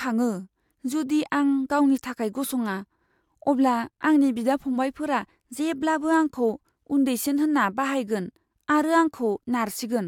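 No technical faults can be heard anywhere in the recording.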